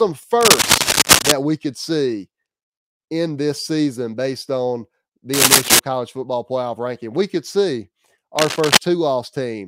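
At 0.41 s a burst of scratchy, crackling rustle jumps in over the speech and lasts until about 1.32 s. It comes back from 5.33 to 5.79 s and again from 8.36 to 8.77 s. Each time it sits a few decibels louder than the speech. This is cable scratch noise, likely from a worn lead, connector or control being moved, so the contact resistance flickers and spits dense, uneven noise into the signal.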